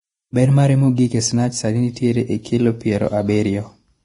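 From start to finish the speech carries heavy damage, likely from Vorbis compression at a rate near 30 kbps. Nothing survives above 10.6 kHz, and the remaining treble turns to hiss-like grain. Unlike a plain low-pass filter, this coarse quantisation adds noise, roughening tones and blurring attacks.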